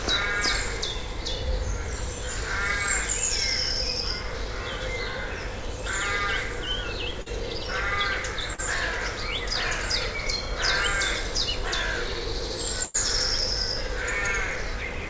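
At 7.22 to 7.28 s and again at 8.54 to 8.60 s there is short concealed packet loss: about 40 ms of the call arrived too late or not at all, and the receiver bridged each hole by extending the preceding sound, following its pitch where it had one and synthesising shaped noise where it did not, before crossfading back into the real signal. Each gap is heard as a brief smear or wobble, and a short transient falling inside it can disappear.

From 12.84 to 12.96 s a burst of packet loss leaves a 100 ms hole that the receiver fills by continuing the last sound while lowering its level, so a pitched sound turns into a held buzz and a noisy one into a fading hiss. No silence is inserted. When the audio resumes it has skipped ahead, with 100 ms of the original sound gone. Across the clip the call codec path shows as nothing above 8 kHz, which fits G.722 at 64 kbps.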